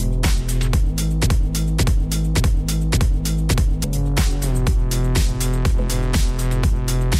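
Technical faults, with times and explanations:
1.26–3.84 s, broken-record loop: a 0.57 s fragment plays back to back five times, each pass identical, so the sound stutters in a fixed cycle and the material that should have followed in that span never arrives. The likely cause is a stalled player or stream that kept resending its last held buffer. On a waveform and spectrogram the same block of shapes repeats at exact 0.57 s intervals, with a hard seam at each restart.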